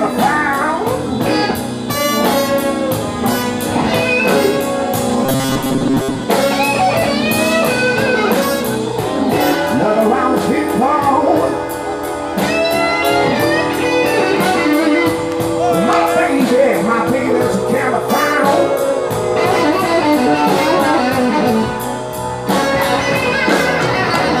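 The audio turns robotic from 5.26 to 6.24 s. A rigid, metallic buzz at 134 Hz follows the natural tone only roughly. This is robotic sound from repeated short buffers. The likely cause is late-arriving audio, with a roughly 7.5 ms slice looped while most real material is skipped.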